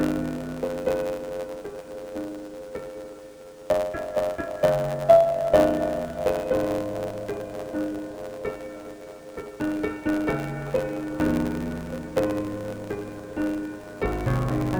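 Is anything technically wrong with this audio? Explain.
Yes. Throughout the clip, the audio suffers from interleaved audio read as planar. Each short block holds alternating left and right samples. Here, though, the first half is taken as one channel and the second half as the other. Each half then plays stretched to half speed, so the overall pace still holds. The blocks last about 10.67 ms, which fits a 512-sample block. That is short. So the sound is dull and robotic, with a buzz at about 93.8 Hz and no clear octave drop.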